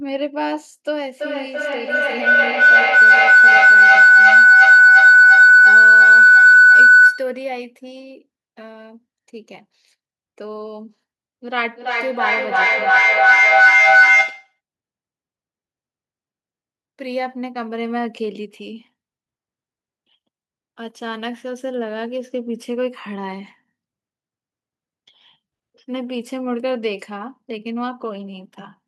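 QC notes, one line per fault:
1.08–7.47 s: feedback howl, a tone near 1.5 kHz building to about 16 dB above the speech with a loop repeat of roughly 300 ms, as the mic-to-speaker loop gains on each pass.
11.75–14.6 s: feedback howl again, the same tone near 1.5 kHz with the same roughly 300 ms repeat, peaking about 14 dB above the speech before the loop breaks.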